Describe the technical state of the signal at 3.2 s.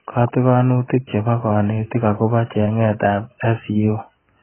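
At 3.2 s the speech carries AAC compression damage, as it does across the whole clip. Nothing sounds above about 3.1 kHz, so sibilants are dull and smeared with a watery warble. The heavy damage points to a very low bitrate, likely AAC-LC around 12 kbps.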